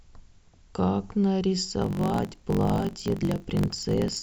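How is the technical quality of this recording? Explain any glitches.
The recording develops a block size mismatch (truncated) from 1.8 s to the end. One stage writes blocks longer than the next stage reads, so the tail of every block is discarded. The sound suggests a 1024-sample read size. Each cut leaves a seam, producing a buzz at about 46.9 Hz. Because part of every block is lost, the speech runs about 1.12 times faster while keeping roughly its normal pitch.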